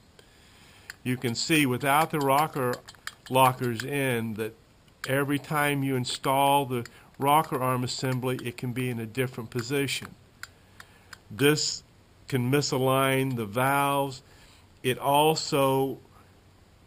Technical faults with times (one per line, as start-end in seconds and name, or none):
none